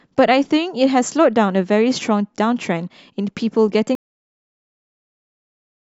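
At 3.95 s the speech hits a cut-off end: the final buffers never got written, so sound stops mid-sound and drops straight to digital silence without decay.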